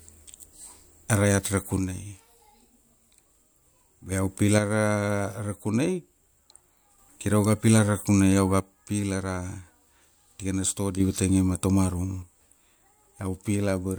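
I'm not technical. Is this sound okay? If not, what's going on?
No. One stereo channel likely drops out four times, from 1.79 to 4.12 s, 4.58 to 6.98 s, 8.60 to 11.00 s, and 12.23 s to the end. Each time the speech suddenly gets noticeably quieter, then jumps back up, except the last time, which lasts until the end.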